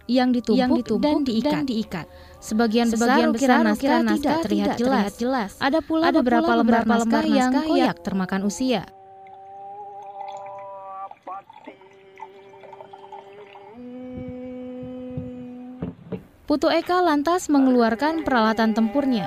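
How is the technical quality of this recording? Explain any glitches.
The recording has one clear fault, a doubled audio track running from 0.5 s to 7.86 s. Throughout that stretch, a second full-band copy of the same audio follows roughly 0.4 s behind the original at about the same level, so every event is heard twice. The copy has no decay or room colouring and starts and stops abruptly. The likely cause is a second capture through a slower path, or an edit that left two copies out of step.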